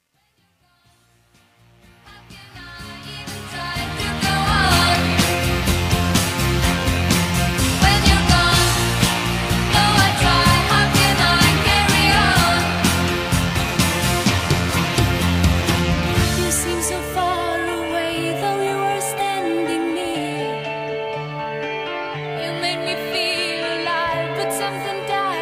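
From 0.0 to 4.67 s, the fade-in passes through a gain stage that keeps only about 11 bits and adds no dither, causing truncation distortion on a fade. The quietest stretch, 0.0 to 2.71 s, turns gritty before the level rises.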